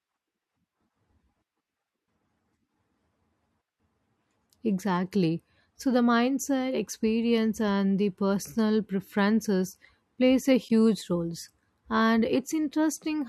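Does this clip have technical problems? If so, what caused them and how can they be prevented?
Yes. There is a corrupt frame decoded at 10.68 to 10.71 s, just after "personal preferences plays a". It is a short glitch lasting about 24 ms. Flipped bits damaged one compressed frame, and the decoder played it anyway. The misread gains and codes put energy at the wrong frequencies, peaking at about -35 dBFS. To prevent this, verify frame checksums and conceal bad frames instead of decoding them.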